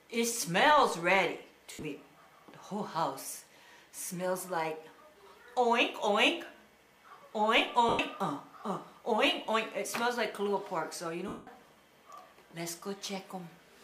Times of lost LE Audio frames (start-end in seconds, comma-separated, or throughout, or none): 1.72-1.82, 7.89-7.99, 9.46-9.48, 11.28-11.47